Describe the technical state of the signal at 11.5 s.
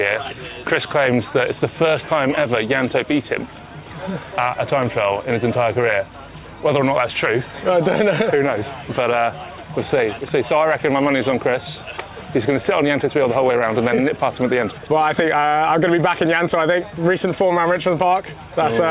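At 11.5 s the signal is intact, with no audible fault at that moment.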